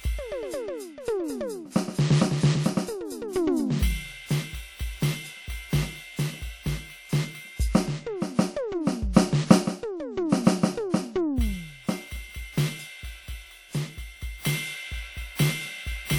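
From the start, the music carries plainly audible damage of the kind WMA compression leaves, likely from a low-bitrate Windows Media Audio encode, and it sounds consistent with about 48 kbps. The encoder works in long transform blocks. Its quantisation noise spreads across tens of milliseconds. Weak detail is dropped to zero. The result rings and sounds washy. A hiss rises and falls with the music. Content still reaches about 20.1 kHz.

At 9.12 to 9.16 s comes a pre-echo. A sharp attack lands late in a transform block. The noise sized for that loud moment is spread across the whole block. So it also fills the quiet stretch just before the hit, about 48 ms of it. A brief hiss leads into the attack. The attack itself sounds soft and smeared rather than crisp.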